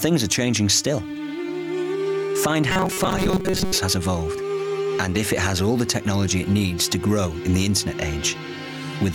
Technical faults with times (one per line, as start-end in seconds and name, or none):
2.70-3.78 robotic sound from repeated short buffers